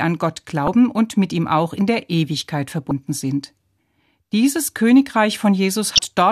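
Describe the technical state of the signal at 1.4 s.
At 1.4 s the speech signal is intact, with no audible fault at that moment.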